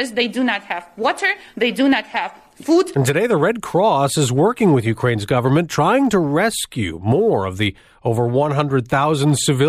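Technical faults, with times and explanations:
Throughout: sample clock jitter. The converter's clock wanders by roughly 2 microseconds, so each sample is captured slightly off its intended instant. The resulting error scales with how fast the waveform is changing, which puts a grainy hiss under the speech, around 35 dB below it, strongest on loud passages and sibilant, high-frequency sounds. Because the error depends on the signal itself, the roughness disappears entirely in the pauses between phrases.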